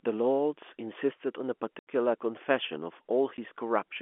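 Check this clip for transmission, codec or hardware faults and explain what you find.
The fault here is packet loss filled with silence, heard twice in the speech over a telephone-band G.711 line. The first gap runs from 1.79 to 1.86 s, an 80 ms hole. The second is a single short dropout at 3.37 s, about 10 ms long. Packets failed to arrive, and the receiver played zeros instead. The signal stops abruptly and restarts. Both lengths fit 10 ms packets.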